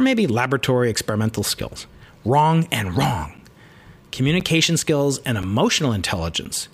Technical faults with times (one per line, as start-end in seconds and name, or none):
3.37-6.46 periodic USB or driver dropouts